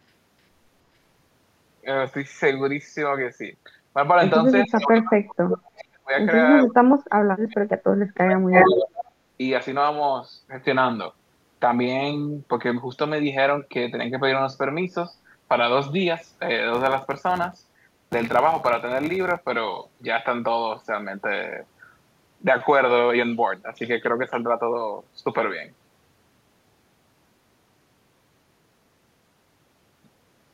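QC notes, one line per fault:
4.67–6.12 s, 6.66–7.70 s, 7.98–9.17 s: speech suppressed in double talk. The talker's level collapses in three stretches, dropping by about 40 dB, about 35 dB and about 40 dB at the deepest points, so the speech fades. The likely cause is an echo canceller that could not tell this talker from loudspeaker echo while both sides spoke at once, so it turned everything down.
4.75–4.80 s and 8.52–8.81 s: echo leak. A delayed copy of the speech comes through, first as a brief scrap about 417 ms late and about 15 dB below the speech, then as a longer burst about 293 ms late that sits about 5 dB above it. This is likely echo from a loudspeaker end that its canceller failed to remove before sending the signal back.
16.74–19.51 s: filter restarted on every block. A steady 93.8 Hz buzz of small ticks rides on the speech and rises and falls with its level. Each tick marks a filter starting from silence at the head of a new block instead of carrying its state over from the previous block. 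The spacing fits a 512-sample buffer.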